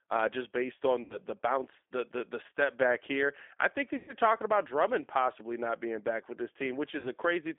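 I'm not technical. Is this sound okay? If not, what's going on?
No. The whole clip sounds thin, slightly rough and a little robotic, like an old phone line. That is the G.729 codec, a phone-call compression that rebuilds speech from a simplified model and drops everything above about 3.5 kHz.

At three moments the speech briefly smears into a fading buzzy tone or noise before recovering: 1.04 to 1.18 s, right after "uh just based on"; 3.96 to 4.13 s, after "back here I think"; and 6.99 to 7.11 s, after "being back with this". This is VoIP packet loss concealed by the speech codec. Pieces of the call went missing, and the decoder stretched the last sound it had to cover each gap.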